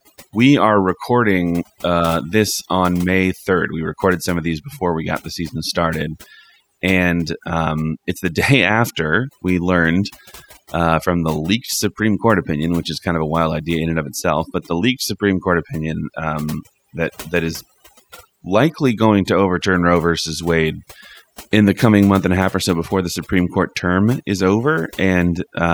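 From start to finish the speech carries overdone noise removal: a denoiser pushed too hard, gating individual frequency bands whenever they sat close to its noise estimate. The quieter parts of the voice get swallowed too, so the gaps go almost silent with little twinkling specks.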